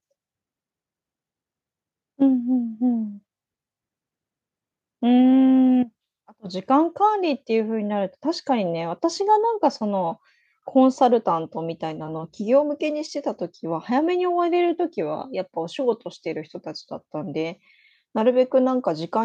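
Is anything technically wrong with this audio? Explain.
No, nothing technically wrong turns up anywhere in this speech recording.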